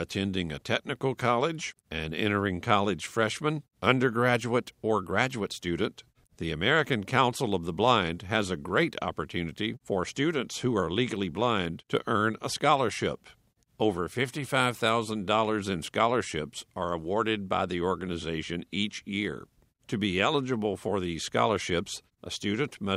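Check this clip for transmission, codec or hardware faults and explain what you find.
Nothing stood out on listening to this speech recording that would point to a problem in its transmission, encoding or the equipment behind it.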